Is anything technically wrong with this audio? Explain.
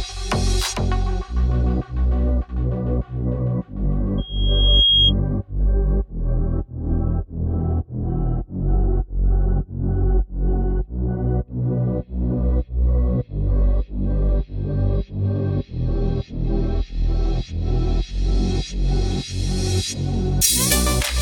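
Yes. Loudspeaker feedback squeal from 4.18 to 5.13 s: the microphone picks up its own loudspeaker, and at 3.3 kHz the loop gain tops unity, so that tone feeds itself, swelling over roughly three-quarters of a second into a piercing squeal about 5 dB above the sound.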